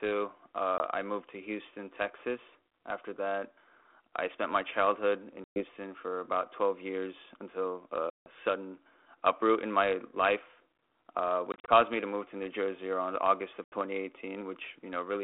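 Speech over an ADPCM call shows packet loss. Hard silent gaps fall at 0.78 s before "I moved to", 5.44 s, 8.10 s, 11.52 s and 13.64 s, each lasting 20 to 160 ms. After each gap the decoder's predictor is out of step, so the sound returns slightly distorted.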